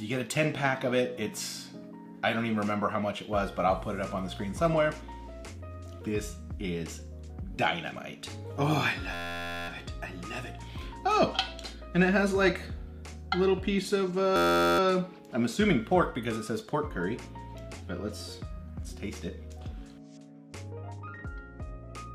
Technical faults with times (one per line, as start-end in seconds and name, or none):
9.14-9.68 system hang loop
14.36-14.79 system hang loop